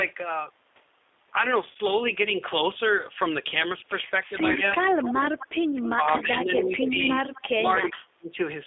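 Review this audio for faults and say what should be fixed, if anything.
G.729 codec damage is audible throughout. The speech sounds rough and slightly synthetic, confined to roughly 300 Hz to 3.6 kHz, which fits an 8 kbit/s G.729A coder rebuilding each frame from a filter and a few pulses. Use a wideband codec such as G.722 or Opus where both ends support it.

VoIP packet loss concealed by the speech codec occurs at 1.71–1.77 s and 4.52–4.58 s. The decoder stretches its last frame into a brief buzzy, fading patch, consistent with three or four lost 10 ms frames. Add a jitter buffer and forward error correction, or improve network quality of service for the voice stream.

Speech suppressed in double talk occurs at 5.32–6.95 s and 7.54–8.30 s. The speech dips by about 25 dB for roughly 0.7 s, then by about 40 dB for about half a second. The likely cause is an echo canceller attenuating during simultaneous talk. 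Tune the echo canceller's double-talk detection so near-end speech is preserved while the far end is active.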